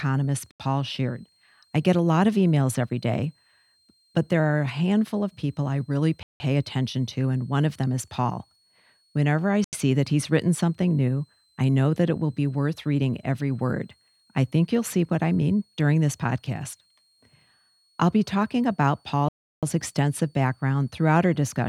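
A switching power supply somewhere in the chain runs in an audible burst mode, producing a switching supply whistle under the speech for the whole clip. It is a faint, high tone near 4 kHz that wanders between 4.04 and 4.55 kHz.

Output blocks then likely go unfilled four times, each replaced by zeros, giving a block of digital silence with hard edges. These occur at 0.51 to 0.60 s (85 ms), 6.23 to 6.40 s (171 ms), 9.64 to 9.73 s (85 ms) and 19.29 to 19.63 s (341 ms). The lengths fit 4096-, 8192- and 16384-sample blocks.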